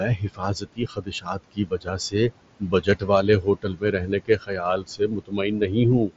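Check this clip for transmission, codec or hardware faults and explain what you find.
The trouble here is the noise suppressor, which is working too hard and taking some of the speech down with the noise.

Noise suppressor artifacts run through the whole clip. It pulls the steady background down by about 21 dB frame by frame, so the room noise, which sits about 17 dB under the speech, drops away in the gaps and comes back up under talking.

Speech cut by the noise suppressor shows up in four stretches: 0.17–2.31 s (roughly a second of it hit, dips to about 20 dB), 2.6–3.09 s (a brief bit, about 17 dB), 3.42–4.61 s and 4.79–5.76 s (around half a second each, about 19 and 20 dB). The suppressor mistakes quiet consonants and word tails for noise, so they sound swallowed.

Through all of it you can hear the mSBC headset codec: nothing above about 7.7 kHz and a light graininess on the louder sounds.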